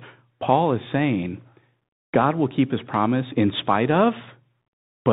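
Throughout, the speech sounds narrow and dull, with scratchy s sounds and a granular hiss underneath: the Bluetooth CVSD headset codec, cutting everything above 4 kHz, consistent with a 64 kbps link.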